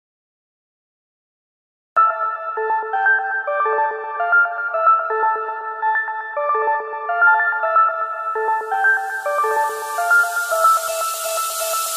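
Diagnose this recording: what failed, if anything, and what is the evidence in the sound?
What failed here is a cut-off start, and it sits at the capture or storage stage, where the recording began late. The first 1.97 s are flat digital silence, with no room tone or hiss. Then at 1.97 s the sound just appears, already partway through, with no natural attack or fade-in. The file opened its write window after the source was already going, so the opening of that sound never made it to disk.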